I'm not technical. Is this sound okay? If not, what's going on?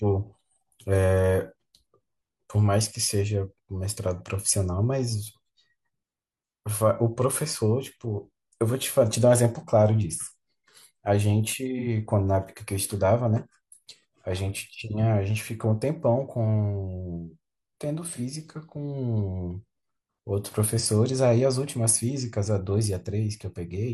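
No. At 11.78, 18.08 and 20.79 s there is AAC frame loss with concealment: a brief smeared, noisy patch where missing audio was guessed, not a silent dropout.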